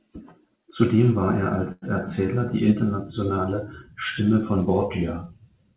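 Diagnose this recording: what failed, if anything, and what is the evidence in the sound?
Short stall from a late packet at 1.72–1.84 s, after "war er": the network jitter buffer ran empty, stretching the last sound about 0.1 s, with nothing lost.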